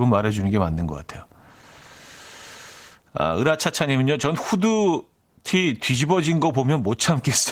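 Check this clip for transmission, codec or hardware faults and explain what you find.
One codec fault runs through the whole speech clip. Opus voice compression is plainly audible from start to finish. The sound points to hybrid mode at roughly 16 kbps with 20 ms frames. A linear-prediction coder handles the band below 8 kHz, and a thin transform layer covers the top. The excitation is coded coarsely, so the speech sounds hoarse and slightly robotic.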